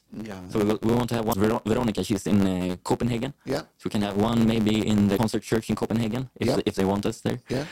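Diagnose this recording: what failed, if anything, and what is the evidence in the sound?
A block size mismatch (truncated) at the driver or buffer stage runs through the whole recording. A steady buzz of about 92 Hz sits under the speech, and the speech plays about 1.07 times too fast while keeping roughly its normal pitch. One stage hands over longer blocks than the next stage accepts, and the tail of every block is discarded. That produces a small discontinuity at each block boundary, heard as the buzz at the block rate. The speed-up ratio fits blocks of 512 samples being cut to about 478.

Damaged data in a compressed stream shows up twice, at the codec or storage stage. The first is from 1.29 to 1.35 s, right after "we want to have". The second is from 5.14 to 5.19 s, just before "church in". Each is a brief disturbance of roughly 50 ms. Corrupted bytes make the decoder misread frames there, lose sync and jump ahead to the next valid frame header.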